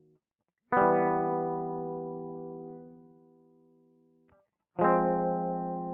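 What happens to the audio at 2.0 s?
At 2.0 s the music pumps and thins: attacks come through, but held tones and their tails sink away. It's a noise suppressor applied to music, present throughout, treating sustained sound as noise and pulling it down by roughly 15 dB.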